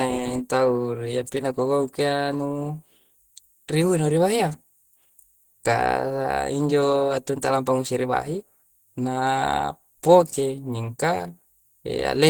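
Throughout the speech, a low-rate codec has likely discarded detail, which fits Opus compression at around 16 kbps in its hybrid speech mode. The voice sounds plainly muffled, hoarse and grainy, even though content still reaches up to about 20.1 kHz.

At 7.42 s, pre-echo appears just before "lampa ngusiri bahi". Quantisation noise sized for a sharp onset was spread across its whole transform block, so a brief hiss of about 10 ms leaks ahead of the attack and blurs it.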